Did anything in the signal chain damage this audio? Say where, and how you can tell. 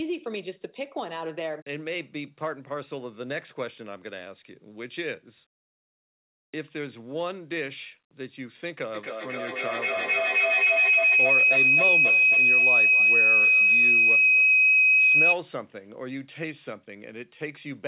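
Yes. Feedback howl in the acoustic loop of the call, from 8.94 to 15.41 s. A tone near 3 kHz grows about 12 dB above the speech, with repeats roughly every 0.3 s.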